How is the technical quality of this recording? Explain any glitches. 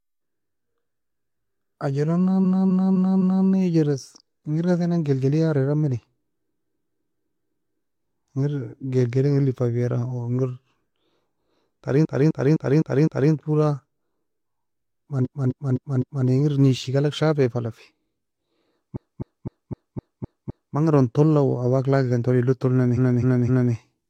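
The recording has repeated frames: six stutters where a 256 ms block of speech replays back to back, at 2.41–3.44 s, 6.46–7.74 s (just after "nan gelgliar era meni"), 12.01–13.29 s, 15.21–16.24 s, 18.92–20.72 s (just before "manga eron toula") and 22.93–23.70 s. Each block plays an extra three to seven times, adding 0.77 to 1.79 s. The block length fits a run of six compressed frames being written more than once, so the decoder replays it.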